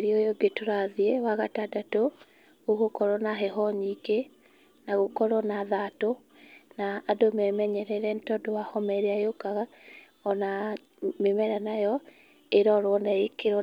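Nothing in this recording stands out as a technical fault; it's just someone talking, with no glitch or interruption anywhere to point at.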